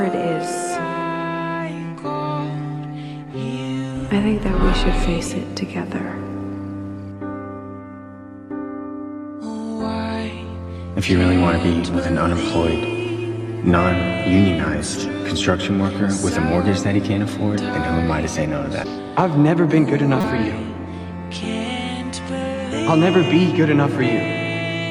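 Damaged data in a compressed stream appears from 20.21 to 20.24 s. Corrupted bytes leave the decoder misreading frames, losing sync and hunting for the next valid frame header, so the sound breaks into a brief glitch lasting about 36 ms.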